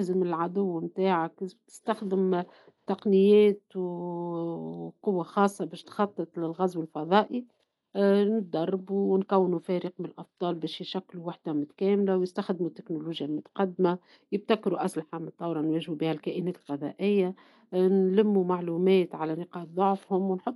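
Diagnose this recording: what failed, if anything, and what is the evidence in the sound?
Dolby Digital compression, throughout, likely at the codec: nothing above 11.5 kHz, and rough fluttering noise where starved lines were dither-filled, fitting about 64 kbps.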